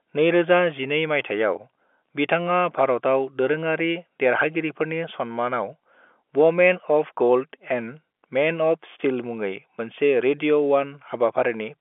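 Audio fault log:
No fault to log in this audio fault log.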